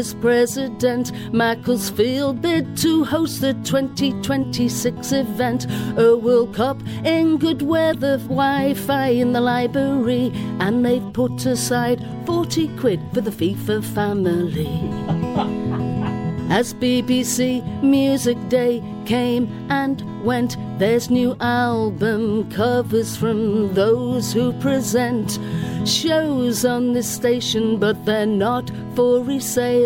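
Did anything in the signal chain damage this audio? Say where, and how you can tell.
Yes. At 7.93 to 7.95 s a brief glitch disrupts the sound, lasting only about 24 ms. That is damaged data in a compressed stream at the codec or storage stage: corrupted frames are misread, the decoder loses sync, then recovers at the next valid frame header.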